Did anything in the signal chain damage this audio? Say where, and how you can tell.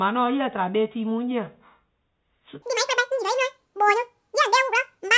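Yes. From 2.62 s to the end at 5.17 s, the speech suddenly runs twice as fast and jumps a full octave higher. This is a wrong sample rate at the playback stage. The samples are clocked out unconverted at double speed, which fits 8 kHz audio played at 16 kHz.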